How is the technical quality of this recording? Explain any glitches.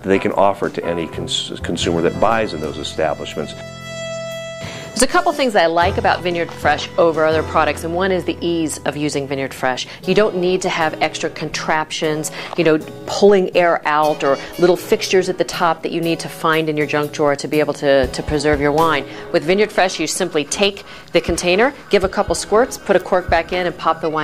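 No glitches or technical faults can be heard anywhere here.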